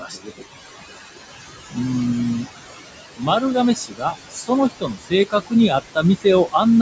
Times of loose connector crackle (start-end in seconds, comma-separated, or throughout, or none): none